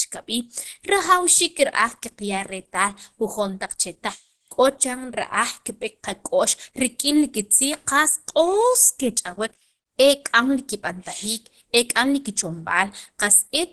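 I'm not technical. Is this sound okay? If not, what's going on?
No. Throughout, the speech sounds muffled and hoarse, with nothing above 12.1 kHz, most likely from heavy Opus compression squeezing it into very little data.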